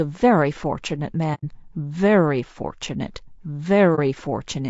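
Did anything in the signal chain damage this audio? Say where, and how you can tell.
Yes. Throughout the speech there is plainly audible low-delay AAC compression, likely AAC-ELD at a rate that fits about 32 kbps. Voices sound rough and grainy. On a spectrogram the pitch harmonics look smeared, noise fills the gaps between them, and the top band looks thin and patchy.

Also at the codec stage, AAC frame loss with muting leaves a soft-edged hole from 1.34 to 1.44 s and a brief dip from 3.95 to 3.99 s. These lengths fit roughly three lost frames and one. The decoder zeroed the missing spectrum, so the waveform fades down and back up across the window overlap.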